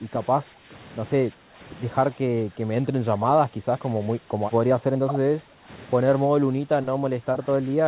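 An echo canceller likely mistook overlapping talk for echo and held the speech down, causing speech suppressed in double talk at 0–0.27, 0.43–0.74, 1.28–1.59, 2.12–3.96, 4.18–4.41, 4.61–5.68 and 6.26 s to the end. The speech dips by about 5 to 15 dB and comes through in pieces, heard through a band that stops near 4 kHz, which fits a G.711 A-law call path.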